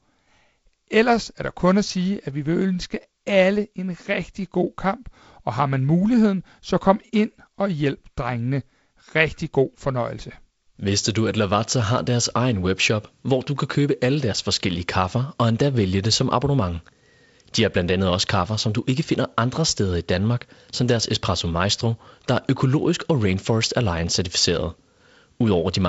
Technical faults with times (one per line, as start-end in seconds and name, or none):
none